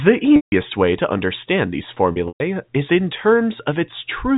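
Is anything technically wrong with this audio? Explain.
Yes. There is packet loss with pitch repetition at two points. From 0.36 to 0.52 s, just before "way to understand these", about 160 ms of audio drops out, which points to eight 20 ms packets lost in a row. From 2.12 to 2.40 s, between "way to understand these" and "is in", another 160 ms goes missing in scattered gaps over 280 ms, the longest run lasting 120 ms. In each gap the receiver loops the last pitch period and fades it out over roughly 50 ms. Short gaps sound like a held, buzzy tone. The longer run decays into silence before the sound cross-fades back in. All of this sits within the 4 kHz telephone band of the G.711 A-law path.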